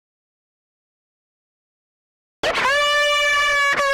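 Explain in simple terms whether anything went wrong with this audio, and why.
The audio starts in an audio dropout to silence lasting until 2.43 s: silence, no room tone, likely from an input briefly disconnected or muted.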